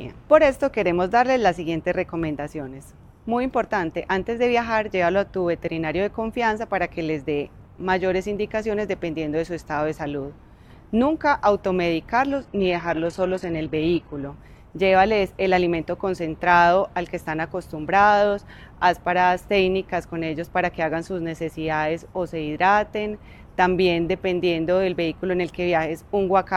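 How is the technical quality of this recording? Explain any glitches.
One fault stands out, a short stretch where the quality suddenly degrades.

Adaptive stream at a lower bitrate, from 12.31 to 14.31 s: the player briefly switched down to a much leaner encoding, likely because the connection slowed. For those two seconds the top end disappears above 14.3 kHz and the highs turn thin, which fits a drop from a roughly 96 kbit/s AAC stream to a low-rate HE-AAC one. The shift in and out is abrupt, with no gap.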